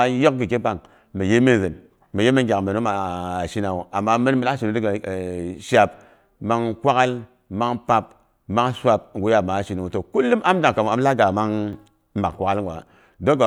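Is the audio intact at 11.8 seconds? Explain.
No. From 11.73 to 11.87 s the speech has a sudden gain jump: the level steps up by about 4 dB from one sample to the next, and the background noise rises with it. That shared step points to a gain change in the digital path applied with no ramp. The likely cause is a gain setting or bit shift taking effect instantly, which makes the level change abrupt rather than a gradual swell.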